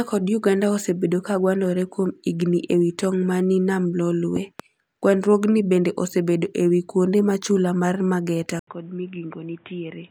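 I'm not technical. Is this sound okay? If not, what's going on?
No, there are two problems. Around 4.36 to 4.62 s there's a loud pop: two sharp pops in quick succession, clearly louder than the speech, which keeps going underneath. That's most likely a sudden electrical jolt, from something like a plug, a switch or static, getting into the recording.

At 8.59 s the input switched to a poorer device: after a brief gap of about 80 ms, the speech comes back quieter, duller and boxier, with nothing above 3.8 kHz and faint new background noise, through to the end. The recording likely jumped to a different microphone or a headset.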